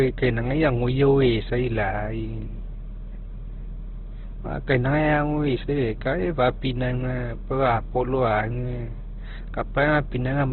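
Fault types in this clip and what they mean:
Opus compression: The speech is band-limited for its whole length, with nothing above 4.2 kHz, and heavily damaged. Its texture is grainy and rough, as if starved frequency bands had been padded with folded or noise-like content rather than left empty, so there is little of the swirling typical of MP3. This combination points to Opus running in its CELT mode at a very low rate, around 12 kbps, which is the likely cause.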